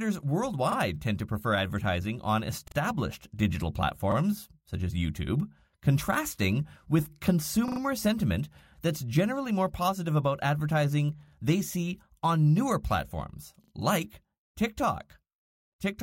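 Repeated buffer stutters occur at 0.72, 2.68, 4.12, 7.68, 11.28 and 13.64 s. New audio arrived late, so the last 40 ms piece played again. Each hard-edged repeat sounds once, twice at 2.68 and 13.64 s, and three times at 7.68 s. Nothing seems skipped.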